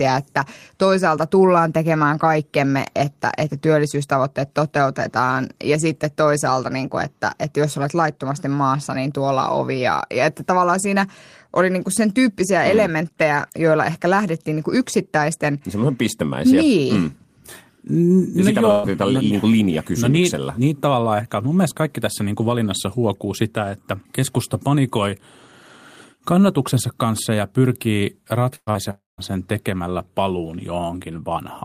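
At 18.71 s a burst of packet loss begins, lasting until 18.86 s. About 120 ms of speech never arrived in time, and the receiver bridged the hole by stretching the last sound for nearly the whole gap, letting it sag in level as it went. The result is a held buzz or fading hiss with no silence, after which speech picks up a little further along. Compared with a short concealed loss, the smear lasts noticeably longer and clearly skips material.

A second burst of packet loss runs from 28.55 to 28.70 s, again with about 120 ms missing. Here the stretched sound fades fully out, leaving roughly 40 ms of silence before the audio returns. That audible gap, on top of the decaying tail, is what separates it from the brief patch that follows.

Right after, from 28.71 to 28.78 s, comes a short concealed packet loss, with only about 40 ms gone. The receiver extended the preceding sound and blended back into the real signal almost at once, so it registers as a quick smear or wobble rather than a held tone. 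No silence appears, and the speech jumps forward by only a fraction.

Between 28.91 and 29.21 s the sound carries on as a fading buzz or hiss, then falls to about 170 ms of silence before speech resumes further on, with roughly 280 ms lost in all. This is likely a long network dropout. Unlike the bursts, the held sound dies away into a long stretch of nothing, which points to the connection stalling rather than a few packets going astray.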